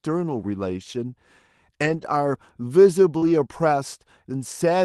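From 1.81 to 2.03 s the sound turns rough and grainy for about 120 ms, with no break. This is a lost packet rebuilt from error correction. Several separate packets went missing, and the decoder played the low-bitrate backup copies carried in the packets that followed. The span fits six 20 ms frames.

At 3.17 to 3.24 s there is a brief smear lasting a few hundredths of a second. This is short concealed packet loss. About 40 ms of audio never arrived in time, so the receiver extended the preceding sound to fill the gap, covering about 44 ms, then blended back into the real signal.

Overlapping that, from 3.22 to 3.32 s, the same coarse, noisy texture returns for about 60 ms. Again, lost packets were rebuilt from their error-correction copies, which fits about three frames.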